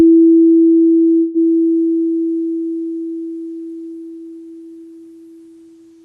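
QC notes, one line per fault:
1.19–1.38 s, call audio freeze: the music stalls, its last sound smeared into a fading buzz for about 0.15 s, then resumes exactly where it stopped with nothing lost, likely a jitter-buffer underrun. Spectrogram shows flat, blurred horizontal bands; waveform shows a decaying stretch, everything after shifted 152 ms later.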